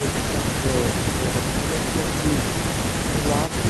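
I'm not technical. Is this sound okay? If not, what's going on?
No. Near the very end, from about 3.46 to 3.55 seconds, there's an echo leak: a faint, quiet copy of the speech comes back roughly a third of a second (311 ms) late. This is likely a listener's loudspeaker whose sound reached their microphone and wasn't fully cancelled before being sent back. Unlike room reverberation, which blurs sound smoothly, this is a separate, delayed repeat that shows up as a brief scrap.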